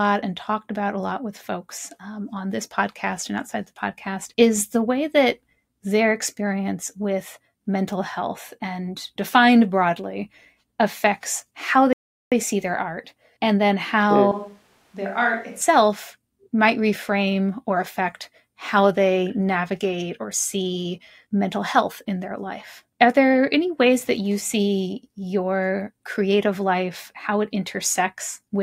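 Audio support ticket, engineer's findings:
Playback stall, 11.93 to 12.32 s: speech cuts to silence for about 0.39 s after "defined broadly affects how", picks up at "see their art and". Likely player underrun or blocked thread.

Switch to a distant microphone, 14.32 to 15.61 s, right after "their art and then": voice goes hollow and roomy, drops about 10 dB, more room noise. Likely close-mic dropout.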